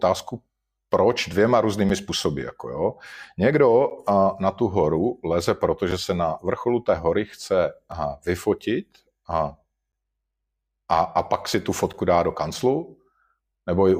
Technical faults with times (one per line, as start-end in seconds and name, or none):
1.89 gap between stream segments
3.90 gap between stream segments
5.91 gap between stream segments
7.92 gap between stream segments
9.92 gap between stream segments
11.93 gap between stream segments